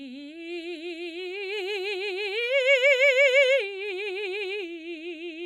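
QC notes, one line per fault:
No fault found in the music.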